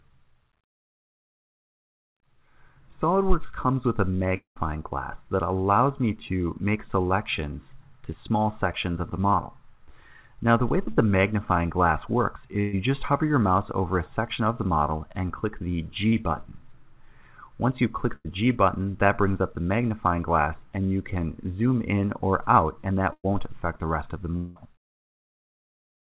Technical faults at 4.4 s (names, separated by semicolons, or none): long network dropout